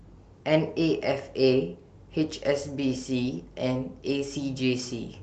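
No faults in the speech; the call path behaves as expected, with nothing above 8 kHz and a coding texture that fits Opus at 32 kbps.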